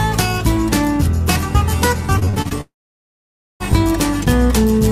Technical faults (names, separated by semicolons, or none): repeated packet loss (robotic sound); long network dropout